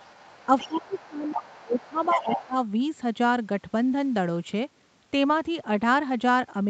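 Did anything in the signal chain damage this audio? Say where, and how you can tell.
Yes. The call's echo canceller likely left loudspeaker pickup behind, so the other side's voice leaks through at 0.0–1.33 s (about 20 dB down) and 1.5–2.45 s (about 10 dB down).

Speech is suppressed in double talk: the canceller likely mistook overlap for echo, ducking the talker by up to about 20 dB at 0.66–1.99 s and about 10 dB at 2.15–2.56 s.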